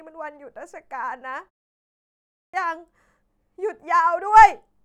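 At 2.17 s, after a pause of 0.75 s, there is a clipped start after a pause. The output device slept through the silence and was slow to wake. About 0.37 s of speech is lost, up to 2.54 s. The speech then bursts in abruptly, missing its opening sounds.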